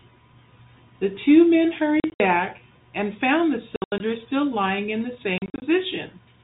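At 2.0–2.2 s, 3.76–4.0 s and 5.38–5.62 s the speech breaks into scattered silent gaps with hard edges, the signature of packet loss filled with silence. Gaps step in 20 ms units, which fits 20 ms G.711 telephone packets.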